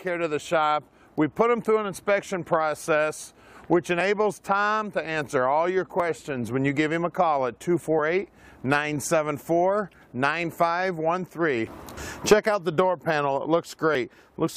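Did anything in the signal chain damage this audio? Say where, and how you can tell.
Yes. Short skips at 4.01, 6.00, 7.99, 11.97 and 13.95 s, spaced on a 2-second grid, point to overlap between stream segments at playback: overlapping segment timestamps make the player trim 5 to 18 milliseconds at these boundaries, so the waveform jumps.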